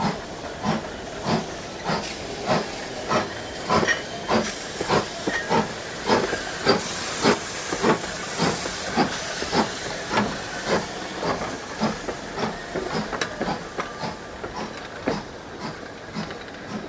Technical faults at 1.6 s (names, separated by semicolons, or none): none